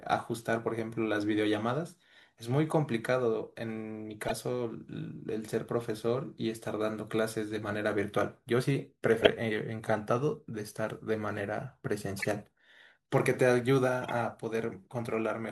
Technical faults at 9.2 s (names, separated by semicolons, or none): corrupt frame decoded